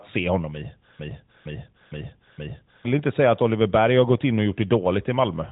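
After "se honom i", from 0.99 to 2.85 s, a 0.46 s fragment repeats four times back to back: a broken-record loop. The stream likely stalled and kept replaying its last held piece, so the speech due there is lost before "inte säga att". Nothing above 4 kHz comes through, which fits the AMR-NB mobile codec at a high rate.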